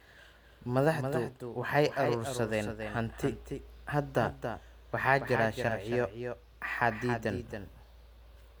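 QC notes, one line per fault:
Throughout, doubled audio track: each sound is trailed by a clean, full-band echo roughly a third of a second behind and about 10 dB quieter, with no decay or room colour. This is likely the same signal captured a second time through a slower path.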